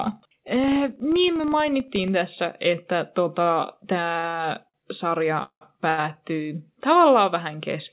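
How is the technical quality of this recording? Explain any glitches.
The recording has several glitches, all sitting on top of a narrow call-codec sound with nothing above 4 kHz, which fits G.711 mu-law.

From 0 to 2.12 s there's a filter restarted on every block: each block starts from silence with a tiny transient, giving a 25 Hz buzz that tracks the speech level.

Short stalls from a late packet hit at 3.42, 4.19, 4.29, 4.69 and 5.89 s. The jitter buffer ran dry and stretched the last sound for 36 to 88 ms. Each one sounds like a briefly held syllable with a faint buzz or dip.

At 5.43 s there's a call audio freeze lasting about 0.2 s. The sound is held for roughly 180 ms, including 80 ms of silence, then resumes where it stopped. The likely cause is packets held up in transit.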